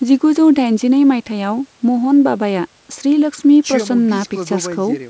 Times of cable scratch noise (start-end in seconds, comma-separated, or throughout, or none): none